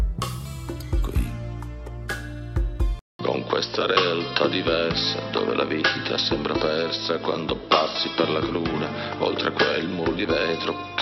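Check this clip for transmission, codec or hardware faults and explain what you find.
One fault is present. At 2.99 s the input appears to switch to a poorer device, likely another microphone or a headset call profile, after a 200 ms silence. From there to the end, nothing above 5.7 kHz remains, so the sound turns duller, with new background noise roughly 30 dB below the signal and a level that stays about the same.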